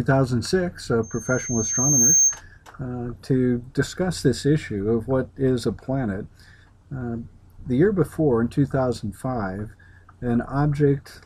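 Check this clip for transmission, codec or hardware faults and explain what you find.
One hardware fault: from 1.03 to 2.41 s a single 6.4 kHz tone swells for about a second into a loudspeaker feedback squeal, roughly 5 dB above the sound. The microphone is picking up its own loudspeaker, so loop gain exceeds one at that frequency.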